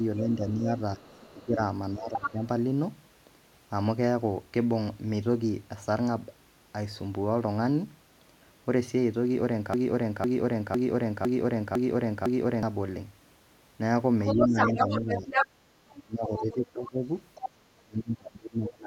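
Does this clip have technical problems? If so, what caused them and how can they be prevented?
Yes. Three kinds of fault are audible, and two of them keep recurring.

Speech suppressed in double talk occurs from 0.00 to 2.42 s, from 14.37 to 17.03 s, and from 17.84 s to the end. The talker's level sinks in patches totalling around a second, then a second and a half, then a second, with dips of about 10, 25 and 30 dB. This likely happens when an echo canceller, faced with both sides talking at once, cannot tell local speech from loudspeaker echo and attenuates both. A better double-talk detector, or headphones, prevents it.

The other side's voice leaking through is heard at 0.17–0.22 s, 1.02–1.45 s, 2.10–2.30 s, 14.26–16.55 s and 17.35–17.50 s. A second voice from the far end sits behind the talker, at about 25 dB below the talker at its faintest and level with the talker at 14.26–16.55 s. 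The likely cause is loudspeaker playback reaching the microphone and surviving the echo canceller. Headphones or a longer, better-converged echo-cancellation filter would stop it.

A broken-record loop runs from 9.74 to 12.63 s. One fragment of 0.50 s repeats exactly six times back to back, and whatever should have played in that span is lost. This likely happened because the player, encoder or stream stalled and kept re-sending the last buffer it held. Detecting the stall and sending silence or a clean dropout instead of repeating stale data prevents it.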